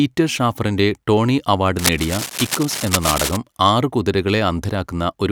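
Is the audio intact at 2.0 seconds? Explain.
No. At 2.0 seconds the speech is covered by cable scratch noise. It runs from about 1.79 to 3.37 s, starting just after "ഷാഫറിന്റെ ടോണി അവാർഡ്". Dense, uneven bursts of scratching and rustling sit only a little below the speech. The cause is likely a worn cable, connector or control being moved. That movement makes its contact resistance jump rapidly, and each jump injects a burst of noise into the signal.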